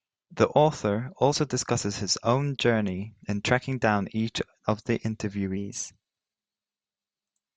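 From 5.57 s, right after "down each of the", the speech turns slightly faster and about 1.5 semitones higher, running 1.09 times fast. That's a wrong sample rate: 44.1 kHz audio played at 48 kHz.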